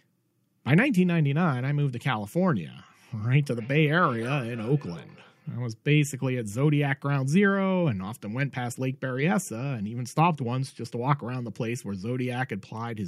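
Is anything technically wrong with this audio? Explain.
Yes. From 3.4 to 5.7 s the speech repeats itself at roughly 300 ms intervals, a thin, ringing return peaking at about 19 dB below the speech. This is feedback echo between two devices: a second device in the room replays the audio, and the first microphone captures it again beyond its own echo canceller's reach.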